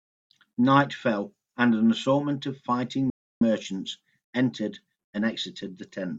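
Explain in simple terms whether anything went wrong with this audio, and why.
Between 3.10 and 3.41 seconds the speech stops dead for about 0.31 seconds, with total silence and no background noise, then resumes mid-flow. This is an audio dropout to silence. The input signal was likely lost briefly, and the recorder wrote nothing but silence.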